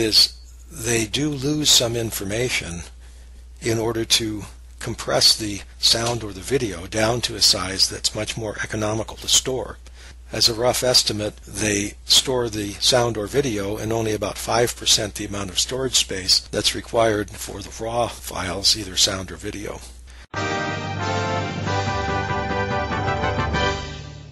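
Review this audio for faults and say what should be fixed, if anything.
Nothing to fix: no faults found in the audio, so no corrective action is needed.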